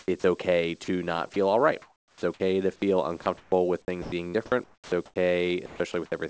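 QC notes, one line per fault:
0.20–0.24 s, 0.84–0.88 s, 1.34–1.36 s: sound dropped by the voice detector. Three brief gaps of 40, 40 and 20 ms, the last just before "all right", where the speech gives way to steady noise or near silence. The sender's detector likely read these quiet moments as background and stopped transmitting, so the receiver filled in comfort noise. On a spectrogram each appears as a narrow slot of flat, featureless noise that breaks the harmonic bands. On the waveform, the envelope collapses to a low, even floor.
1.82–2.40 s (after "all right", before "to feel"), 3.22–3.52 s (after "to feel"), 4.02–4.36 s, 4.64–5.16 s, 5.66–6.12 s: sound chopped by the voice detector. Within each stretch the detector toggled on and off repeatedly, replacing about 460, 180, 160, 380 and 220 ms of speech with synthetic noise. The likely result is choppy syllables. The spectrogram shows speech harmonics alternating with smooth noise patches, all capped at 8 kHz by the G.722 path. 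The waveform shows a stuttering envelope.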